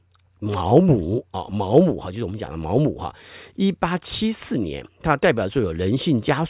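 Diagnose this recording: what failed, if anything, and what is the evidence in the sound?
Nothing failed; no fault is audible anywhere in the recording.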